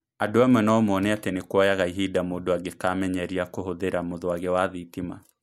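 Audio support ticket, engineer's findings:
No faults found in this speech recording.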